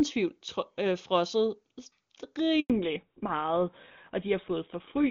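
At 2.60 s the speech dies away and stays silent for 100 ms until 2.70 s. This is a handover gap: the call switched networks, and no speech frames arrived during the changeover. From 2.70 s to the end, the voice turns duller and rougher, with nothing above 4 kHz. This is a fallback to narrowband, where the call dropped from clear HD Voice, which fits AMR-WB at its top rate, to a GSM full-rate codec.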